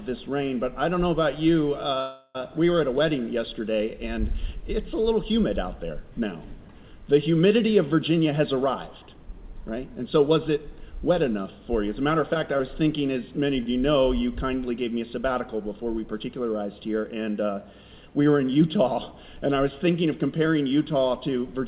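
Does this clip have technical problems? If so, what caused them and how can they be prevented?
Yes. A call audio freeze runs from 2.00 to 2.37 s. The receiver extends the last sound for about 0.35 s, with a brief silence, then resumes where it stopped, so nothing is lost. This is likely caused by delayed packets draining the jitter buffer. Prevention: reduce network congestion or prioritise call traffic with QoS so that packets arrive steadily.

Jitter buffer speed-up occurs from 8.11 to 11.31 s at 107% speed and from 15.79 to 16.30 s at 111% speed. The pitch stays the same while tempo rises, as the buffer trims pitch periods to shed excess delay: roughly 0.2 s in the first stretch and about 70 ms in the second. Prevention: smoothing packet delivery avoids the bursts that overfill the buffer.

Short concealed packet loss appears at 12.34 to 12.37 s and 12.57 to 12.61 s. In each, 20 ms of audio never arrived, and the receiver filled the gap by continuing the preceding sound, leaving a brief smear. 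Prevention: forward error correction or redundant packet coding protects against single lost packets.

A short stall from a late packet occurs at 13.63 to 13.68 s. The sound is held for 26 ms until the packet arrives, with nothing missing. Prevention: a slightly deeper jitter buffer absorbs this kind of isolated lateness.

The G.711 mu-law call path limits all content to below 4 kHz.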